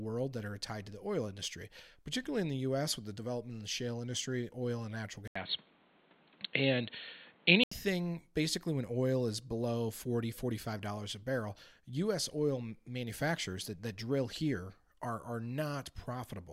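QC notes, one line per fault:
5.28–7.72 s, input switched to a poorer device: after a gap of about 80 ms at the switch, the sound goes dull and boxy, with nothing above 4.3 kHz, the level shifts by about 5 dB, and a new noise floor sits about 35 dB under the signal. It's likely the input jumped to another microphone or a headset's call profile, a device with a narrower band and its own tone, level and noise. The fuller sound returns at 7.72 s.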